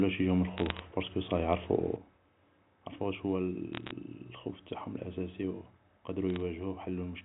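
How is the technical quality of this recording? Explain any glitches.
The recording has two kinds of glitch: three short bursts of crackle and one abrupt drop in level that lasts to the end. The speech comes over a G.711 mu-law telephone channel, so it is band-limited below 4 kHz.

Bit errors on a digital phone line occur from 0.58 to 0.79 s, 3.73 to 3.91 s and 6.30 to 6.40 s. Bits in the 8-bit logarithmic samples were flipped at a low rate, well under one percent. Each corrupted sample jumps to a wrong value, and hits on the sign or upper bits produce sharp ticks. In each burst the speech underneath stays intact while a scatter of crackle sits on top of it.

A sudden gain jump happens at 1.96 s. The level falls by about 8 dB in a single step and stays there until the clip ends. This is likely a digital gain setting applied without a ramp. Because the speech and the background noise both drop together and instantly, the effect sounds like a hard cut in loudness and not like a fade.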